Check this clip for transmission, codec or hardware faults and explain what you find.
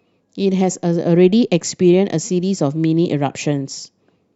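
One fault is audible in this speech clip. At 3.04 s, damaged data in the compressed stream makes the decoder lose frame sync. The result is a brief glitch, seen as a thin broadband vertical smear on a spectrogram and a waveform discontinuity.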